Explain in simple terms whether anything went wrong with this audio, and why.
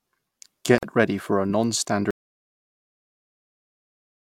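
Two things go wrong here. First, at about 0.78 s there's a tiny hole, roughly 46 milliseconds of silence, right before "ready for a". That's a gap at a join of encoded pieces: the recording was saved in separate chunks, and each chunk carries a sliver of padding at its edges. Nobody trimmed that padding when the chunks were stuck back together, so you hear a quick blip of nothing before the speech carries on from where it stopped.

The bigger problem starts at about 2.11 s. The sound cuts out completely and never comes back, all the way to the end of the clip. That's an audio dropout to silence. It's dead digital silence, with no background hiss or room sound at all, so the likely cause is that the input was lost, through a device disconnecting, a link failing or something getting muted, while the recorder kept writing silence. Whatever was said after that point is gone.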